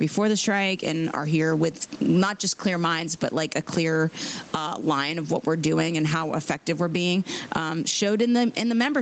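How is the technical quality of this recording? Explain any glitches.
The recording has one fault, gain pumping, running through the whole speech clip. The audio also stops at 8 kHz, which fits a band-limited call codec, and room noise sits about 37 dB under the speech.

Gain pumping, throughout: the input gain was likely set far too high, so a fast limiter or compressor clamps down on each loud syllable and lets go in between. The level swings by something like 15 dB. Loud and soft passages end up pressed close together, giving a squashed, breathing sound.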